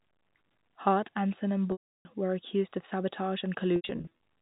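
At 1.72 to 2.05 s, packet loss with pitch repetition bridges 330 ms: the last pitch period loops as a buzzy hold, fading to silence before a brief cross-fade. From 3.76 to 4.11 s, shorter scattered losses (longest 80 ms) give repeated buzzy stutters, seen as flat, comb-like harmonic stripes and repeating waveform cycles.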